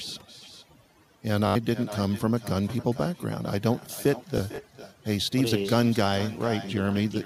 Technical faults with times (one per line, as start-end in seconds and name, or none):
0.00-7.25 overdone noise removal
0.00-7.25 echo with no canceller
1.47-1.56 Bluetooth stutter
4.38-4.58 Bluetooth stutter